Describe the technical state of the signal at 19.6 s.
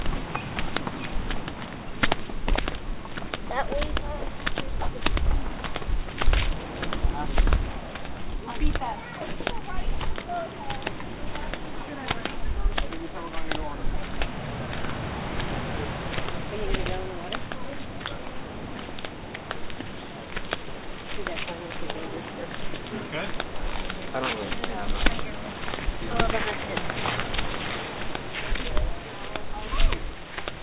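At 19.6 s the audio is intact, with no fault present, only the band limit of the call path, which leaves nothing above 4 kHz, as a G.711 mu-law link at 64 kbps would.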